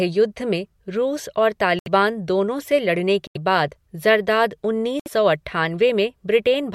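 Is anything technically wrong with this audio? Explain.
Yes. The speech drops out three times, in what sounds like a Bluetooth stall. At 1.79 to 1.88 s, just before "दोनों से लड़ने", there is about 72 ms of silence. At 3.27 to 3.37 s, between "दोनों से लड़ने" and "बाद ज़रदाद", it lasts about 83 ms. At 5.00 to 5.08 s, after "बाद ज़रदाद", it lasts about 64 ms. The likely cause is radio interference delaying packets until the headphone buffer emptied. Each time, the sound cuts cleanly and then resumes.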